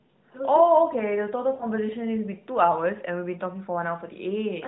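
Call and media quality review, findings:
Lost AMR speech frames, 1.54–1.65 s: radio-link bit errors failed frame checksums, a gap fitting about three 20 ms frames. Decoder concealment reused the last pitch and vocal-tract parameters at falling gain, so speech smears and fades, then resumes rough for a moment.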